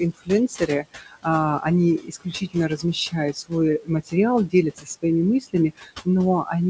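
From the start and through the whole clip, noise suppressor artifacts are present. The suppressor pulls the steady room noise, which sits about 17 dB under the speech, down by about 18 dB in the gaps, so the background dips between phrases and swells back under them. On a spectrogram the noise floor looks blotchy and patchy, fading and returning frame by frame, all of it ending at the 8 kHz ceiling of the call codec.

Between 0.13 and 1.25 s, speech cut by the noise suppressor appears. The suppressor mistakes parts of the speech for noise and drops them by as much as about 19 dB, swallowing soft consonants and endings for a total of around 0.4 s. It happens again from 2.0 to 4.14 s, with about 18 dB drops covering roughly 0.7 s. A shorter span follows from 4.49 to 5.04 s, dropping about 14 dB for a fifth of a second. The deepest one runs from 5.41 to 6.07 s, falling about 20 dB over roughly a third of a second. 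On the waveform these show as sudden narrowings of the envelope inside the speech, and on the spectrogram as speech energy that vanishes into dark gaps instead of trailing off smoothly.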